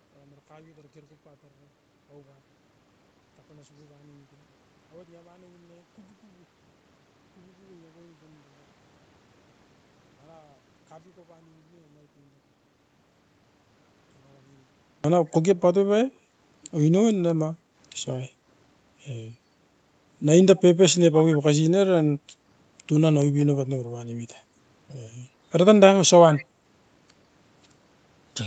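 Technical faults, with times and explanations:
0.0 to 15.04 s, one channel inverted. Played in mono, the speech nearly vanishes here. The level falls by about 34 dB. Centred speech and low end cancel almost entirely. Only a faint residue of what differs between the two channels survives. The likely cause is one stereo channel with reversed polarity. Each sample on that side is flipped in sign. Summing them leaves little but the difference.
17.57 to 17.75 s, background gated by the echo canceller. The room sound dips briefly here, for about a fifth of a second. At its deepest the drop is about 7 dB. Then the background returns. This happens when the far-end loudspeaker is active. The echo canceller suppresses the microphone to keep that playback out. Room tone goes down with it, so the gap is heard as a short hole.
26.32 to 26.45 s, echo leak. A brief, faint copy of the speech follows the original 132 ms later. 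It sits roughly 20 dB below the speech. It is a short scrap, not a sustained repeat. The likely cause is a loudspeaker on one end whose echo canceller missed part of what the microphone caught. That residue went back down the line and arrives late. The call's usual band limit, with nothing above 8 kHz, shapes it too.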